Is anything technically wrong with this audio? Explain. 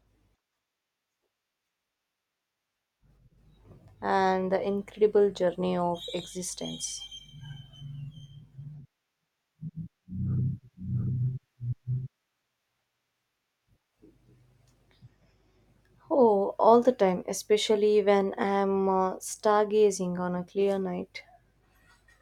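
Yes. From 10.30 to 12.08 s, a doubled audio track appears. An equally loud copy of the speech trails by roughly 0.7 s, likely from a second, slower capture path. It starts and stops abruptly, without decay.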